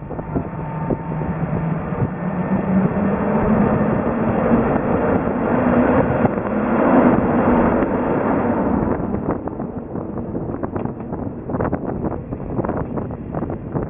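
Throughout the clip, the audio was brought down to a much lower sample rate without a proper anti-aliasing filter beforehand, which fits a drop from 48 kHz to 6 kHz. This is aliasing: everything above 3 kHz, the new fold point, reflects back into the band as false, unrelated tones sitting about 25 dB under the real signal. High, bright content turns gritty and metallic, and the spectrum stays dense right up to 3 kHz.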